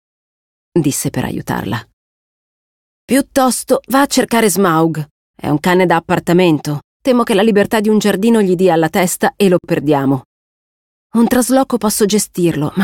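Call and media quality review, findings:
Gap at a join of encoded pieces, 9.59–9.64 s: 53 ms silence cuts into continuous sound, edges smeared, sound resumes where it stopped. Probable component: segment concatenation. Encoder start delay and last-frame padding left untrimmed at the join.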